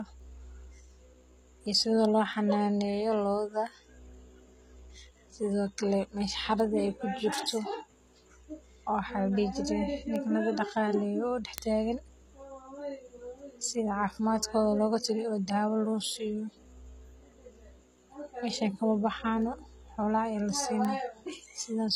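Low-bitrate audio saved at a high bitrate, throughout the speech: the file is a high-rate MP3, yet nothing is present above 14.9 kHz, and the smeared, watery texture of aggressive coding sits under every phrase. That points to an earlier pass through a very low-bitrate codec of the HE-AAC kind. The extra bitrate of the final MP3 only preserved that damage faithfully. It could not bring back the lost top end or the detail.

Word clock ticks, from 0.20 s to 21.56 s: sharp ticks of varying strength recur about every 0.7 s, around thirty in all, so they continue through the whole clip. This is the sound of a digital link read by a device whose clock runs free of the sender's, off by something like 30 parts per million. Each time the two clocks slip a sample past each other, one sample is dropped or repeated and a click breaks through.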